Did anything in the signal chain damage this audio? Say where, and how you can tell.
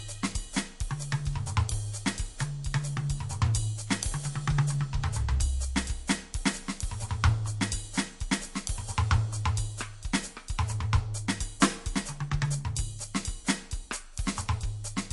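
Yes: MP3 compression, throughout the music, at the codec stage. Nothing survives above 11.3 kHz and the damage is plainly audible, with watery, swirling texture as weak spectral lines flicker between frames. A bit-starved encoder, likely near 48 kbps, caused this.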